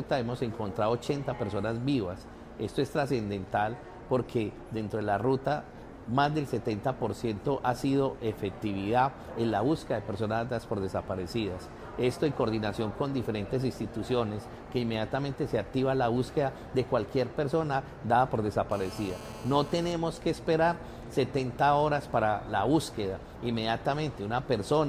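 GSM phone buzz, 18.71 to 19.92 s: a steady, raspy 217 Hz buzz about 17 dB below the sound, from audio circuitry rectifying a nearby 2G phone's transmission bursts during a call.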